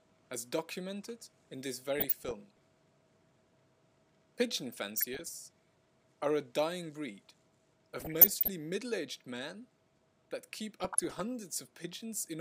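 Four bursts of burbling cut across the audio at 1.93–2.64 s, 4.97–5.31 s, 8.00–8.48 s and 10.80–11.22 s. This is DAB burbling: weak reception lets bit errors, around half a percent, corrupt MP2 scale factors, making individual sub-bands jump.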